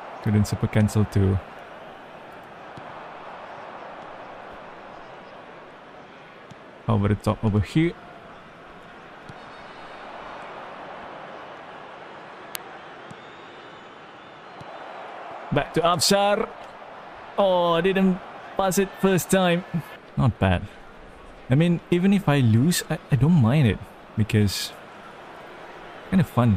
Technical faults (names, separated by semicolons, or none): uninitialised buffer